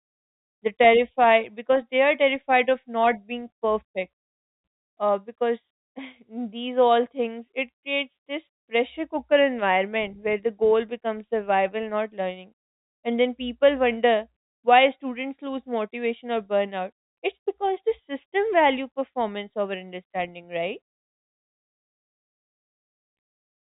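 Nothing stood out on listening to this telephone-band speech, which carries the narrow, G.711-style sound of a fixed-line call with nothing above about 3.8 kHz.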